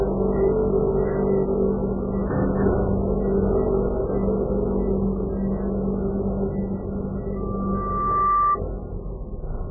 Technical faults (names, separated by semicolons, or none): MP3 compression; loudspeaker feedback squeal